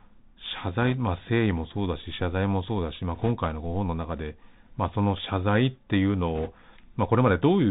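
The whole clip has passed through the Bluetooth CVSD headset codec, a one-bit delta coder whose adaptive step cannot keep pace with fast, bright sounds. The audio is cut off above 4 kHz, s sounds turn scratchy, loud high parts distort, and a granular hiss sits under the speech, which fits a 64 kbps narrowband headset link.

Bit errors on a Bluetooth voice link appear three times: at 0.82 to 0.95 s, 3.15 to 3.31 s, and 6.35 to 6.51 s. Flipped bits, at a rate of a percent or two, push the delta decoder off course. Each error is small and fades, so the speech takes on a brief rushing crackle rather than loud clicks.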